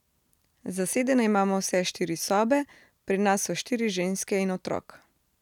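No technical faults can be heard anywhere in the speech.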